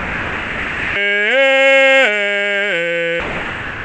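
A music clip whose opening, from 0 to 0.96 s, and closing, from 3.20 s to the end, are replaced by flat comfort noise, likely sound dropped by the voice detector. The spectrogram shows featureless noise with no harmonic structure or onsets in those spans, and the waveform shows a low, even band, all beneath the call path's 8 kHz ceiling.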